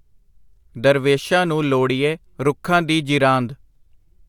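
No technical fault can be heard anywhere in this speech recording, and the signal holds steady throughout without any defect that calls attention to itself.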